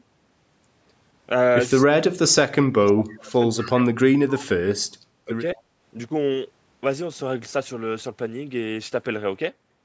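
Speech suppressed in double talk runs from 1.82 to 3.85 s. Over roughly a second and a half within that span, the talker's level sinks in pieces, at its deepest by something like 35 dB, so parts of the sound fade almost to nothing. This is likely an echo canceller that could not tell the near talker from loudspeaker echo while both sides spoke at once, and so turned everything down together.

Echo leak appears twice, at 3.58 to 3.68 s and at 5.56 to 5.62 s, each time as a brief scrap of the voice returning about 221 ms late. The first scrap sits well below the main speech, around 20 dB down, and the second is fainter still, near 35 dB down. The likely cause is a far end playing the call on a loudspeaker whose echo canceller let part of the microphone pickup through and sent it back. Both scraps are confined below 8 kHz, like the rest of the call audio.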